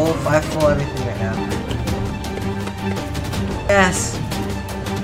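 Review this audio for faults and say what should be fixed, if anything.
Compressed frames skipped at 1.37 s and 3.69 s: the audio jumps ahead about 0.2 s, then about half a second, consistent with whole frames of roughly 93 ms. To prevent it, check file integrity after encoding and transfer and re-encode any damaged frames.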